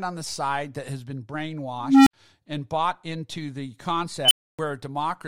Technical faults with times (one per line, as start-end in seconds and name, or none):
1.81-2.13 unstable filter
4.25-4.59 unstable filter